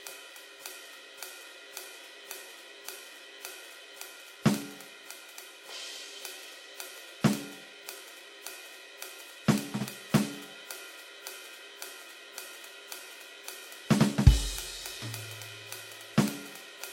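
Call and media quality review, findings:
Music, throughout. Nothing above 16.2 kHz. Two different sets of coding artefacts audible at once, layered over each other. Likely transcoding between lossy codecs: an HE-AAC encode, consistent with about 32 kbit/s, then re-encoded to WMA, consistent with about 96 kbit/s. The second encoder spends bits reproducing the first one's damage and adds its own on top. The lowest cut-off in the chain persists.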